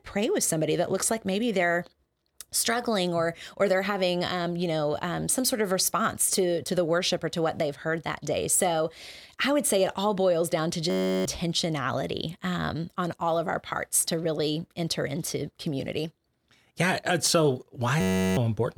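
A system hang loop strikes twice: from 10.90 to 11.25 s, right after "all boils down to", and from 18.01 to 18.37 s, after "yeah uh so". Each time the machine stalled while the audio hardware kept replaying one 10.67 ms slice of its ring buffer, which fits a 512-sample buffer, over thirty times. That tight repetition comes through as a steady buzz at 93.8 Hz, and about 0.4 s of the speech is lost at each point.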